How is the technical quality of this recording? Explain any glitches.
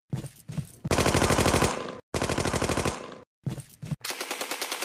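No glitches or technical faults can be heard anywhere in the recording.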